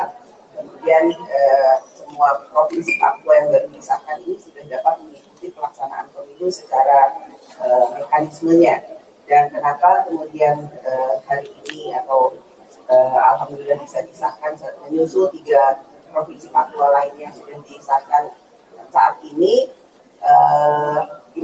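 The level pumps and flutters through the whole clip, with held and fading sound sinking while sharp onsets come through, a swing of around 15 dB. This is a noise suppressor applied to music or sounds: a speech-tuned suppressor treats steady tones and decays as noise and turns them down. The sound cut by the noise suppressor is clearest at 0.12–0.84 s, 1.81–7.6 s, 8.95–9.3 s, 10.69–12.89 s, 14.05–20.22 s and 21.18–21.36 s, where sustained parts drop by up to about 11 dB and their tails are clipped short. This is all heard through a call path whose band stops at 8 kHz.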